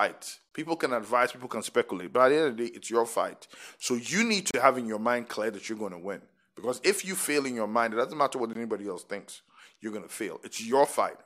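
At 0.49 to 0.51 s the speech drops out for about 25 ms, then again at 4.51 to 4.54 s for about 31 ms, and at 8.53 to 8.55 s for about 20 ms. These are gaps between stream segments. Each boundary, every 4 s, leaves a small timestamp hole that the player fills with silence. You hear clean, hard-edged dropouts, but nothing is actually missing. The speech simply resumes a touch late.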